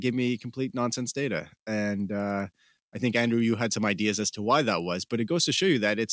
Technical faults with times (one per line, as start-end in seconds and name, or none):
0.00-6.12 resampler restarted on every block